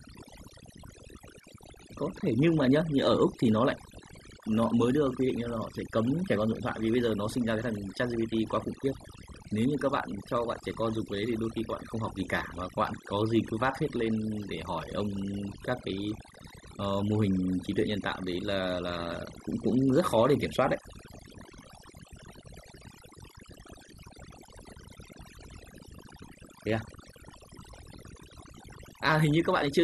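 A speech recording suffers from overdone noise removal for its full length. The suppressor was pushed too hard, so any frequency band sitting close to its noise estimate gets cut deep or removed entirely, and the quieter parts of the voice are caught along with the noise. Between phrases the background drops away and breaks up into twinkling, chirpy specks.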